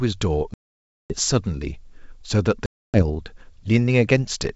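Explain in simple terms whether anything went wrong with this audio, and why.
Yes, the sound twice drops to dead silence, from 0.54 to 1.15 s and from 2.66 to 3.03 s, gaps of about half a second and about a quarter second. This is packet loss on an ADPCM call: chunks of the stream never arrived. Unlike a simple mute or a quiet pause, each gap has hard edges, and the speech returns slightly distorted, because the receiver's running prediction lost track of the sender's. It then settles within tens of milliseconds.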